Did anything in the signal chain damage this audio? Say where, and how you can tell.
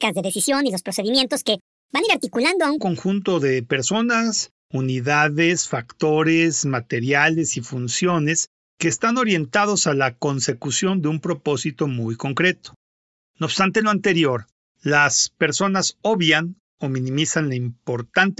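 Yes. From the start to 2.78 s the speech runs 1.5 times too fast and sits about 7 semitones high, then drops to normal speed and pitch just before "conjunto de personas unidades". This is a wrong sample rate fault at the playback stage. The samples were clocked out faster than they were captured, with no rate conversion, which fits 16 kHz audio played at 24 kHz. Speed and pitch rise together by the same 1.5 ratio.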